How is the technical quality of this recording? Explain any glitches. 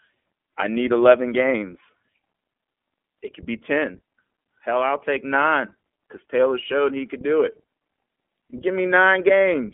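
The quality is limited by one fault heard throughout. The iLBC codec confines the speech to about 200 Hz to 3.4 kHz, with nothing above 4 kHz. Each 20 ms frame is coded independently. The speech sounds plainly rough and synthetic, which fits a 15.2 kbps mode.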